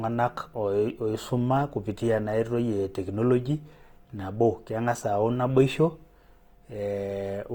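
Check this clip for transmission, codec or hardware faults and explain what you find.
One codec fault runs through the whole clip: Opus compression, most likely encoded in the music-oriented CELT mode at a low rate, which points to about 24 kbps. With too few bits to describe every band, the encoder preserves each band's overall energy but fills in the fine detail by folding lower bands upward or substituting noise. The speech therefore turns grainy and rough, with voiced tones smeared into a noisy texture. The bandwidth stays full, reaching up to about 20.2 kHz.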